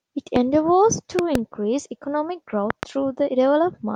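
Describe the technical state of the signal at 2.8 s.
At 2.8 s the signal is carrying a loud pop, spanning about 2.70 to 2.85 s. A sudden voltage pulse, likely from a plug, switch, static discharge or driver glitch, has been added on top of the audio, and the downstream circuitry shapes it into a brief transient. Two pops are heard in quick succession, peaking roughly 20 dB above the speech, which continues underneath without interruption.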